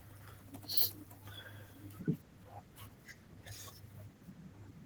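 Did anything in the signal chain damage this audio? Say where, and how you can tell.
Yes. Throughout, the speech sounds hoarse and slightly robotic, with a grainy texture from coarsely coded excitation, though the band stays open to about 22.2 kHz. This is Opus voice compression at the codec stage, in hybrid mode, which fits a low rate of about 16 kbps.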